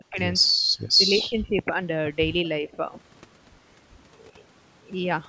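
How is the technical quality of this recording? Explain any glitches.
The speech drops away three times, in a way that points to speech suppressed in double talk: from 0.0 to 0.19 s (down about 40 dB), 0.72 to 1.8 s (about 20 dB) and 2.61 to 2.78 s (about 15 dB). The likely cause is an echo canceller mistaking the talker for echo while the far side spoke, so it turned both down. Unlike a packet dropout, the level sags by varying depths rather than falling to instant silence. The call's microphone processing leaves the band ending at 8 kHz.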